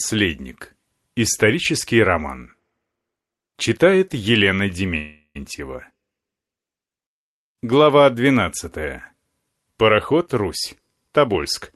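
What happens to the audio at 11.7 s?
At 11.7 s a jitter buffer speed-up, running from 10.13 s, is just ending. The receiver trimmed short pitch-period pieces to drain excess buffered delay, removing around a tenth of a second. The speech runs about 5% faster and sounds hurried, yet its pitch stays unchanged, unlike a resampling speed error.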